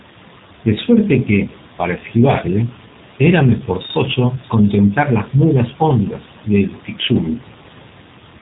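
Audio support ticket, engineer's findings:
G.729 codec, throughout. Speech plainly rough, slightly synthetic. Nothing above 3.8 kHz; spectrogram shows hard ceiling there, harmonics blurred. Sound suggests G.729A near 8 kbit/s: speech rebuilt from vocal tract filter, pitch predictor and sparse pulses in each 10 ms frame.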